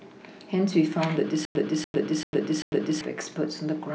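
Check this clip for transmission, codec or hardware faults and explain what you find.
One playback fault is present. From 1.45 s to 3.01 s the speech turns into a stutter with silent gaps: the same 290 ms burst plays four times, each followed by 100 ms of dead digital silence, so it pulses at a steady 390 ms period. The likely cause is a stalled stream or player that kept replaying its last buffered fragment on each retry, then ran dry. The speech that belonged in that stretch never arrives.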